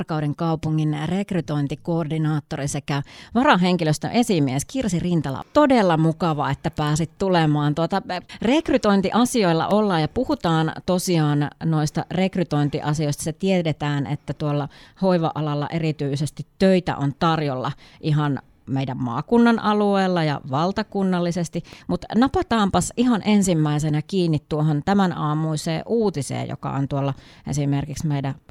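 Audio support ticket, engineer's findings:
Nothing stood out on listening to the speech, so there is no symptom to log and no component to flag for this ticket.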